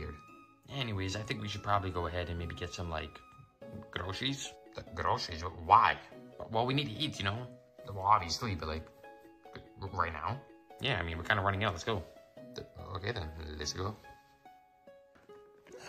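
No technical faults are audible anywhere in this clip.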